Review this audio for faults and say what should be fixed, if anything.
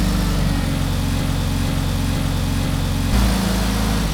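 From 1.21 s to 3.13 s the audio falls into a broken-record loop: a fragment of about 0.48 s plays four times back to back, identical each time, and whatever should have sounded in those two seconds never arrives. The likely cause is a player or stream stalling and resending its last held buffer. On a spectrogram this shows as four matching blocks in a row; the waveform repeats the same envelope with abrupt seams. Preventing it means adding buffer-underrun handling that outputs silence or reconnects rather than replaying stale data.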